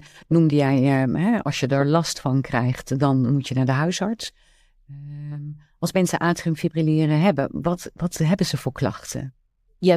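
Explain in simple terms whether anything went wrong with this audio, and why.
Listening closely to this speech recording, nothing stood out as having gone wrong.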